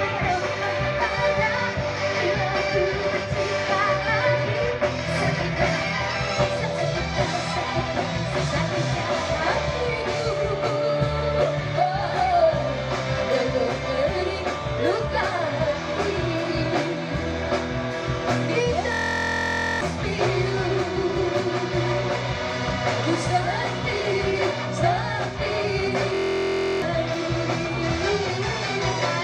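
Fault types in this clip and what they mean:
System hang loop: the computer or its audio driver stalled while the sound hardware kept replaying the same small ring buffer, which fits a 1024-sample buffer. A 23.22 ms slice of audio repeats exactly at 43.1 Hz, so the sound turns into a steady, pitched buzz from 18.92 to 19.81 s and again from 26.15 to 26.82 s, with roughly a second and then about 0.7 s of the real audio lost.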